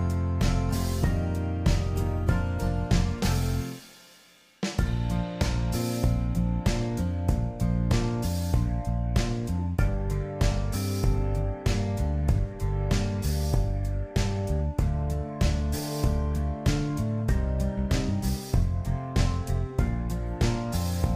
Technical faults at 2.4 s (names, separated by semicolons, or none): none